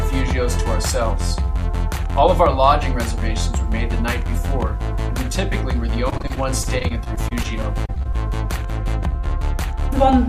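The audio turns choppy and robotic from 6.09 to 8.16 s. This is repeated packet loss. Packets went missing or arrived late again and again across those two seconds. Each hole was patched by stretching the previous sound forward. Nearly twenty short dropouts follow one another, the longest lasting 29 ms. About 327 ms of the stretch is patched-in sound. Another 240 ms is simply missing.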